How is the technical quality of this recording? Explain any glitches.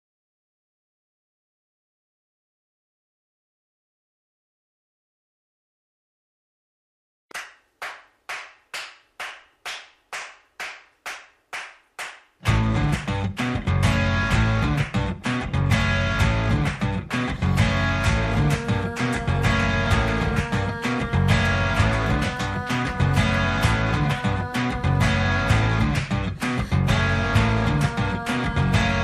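Nothing in the recording stood out as a technical problem on listening, and there are no glitches to explain.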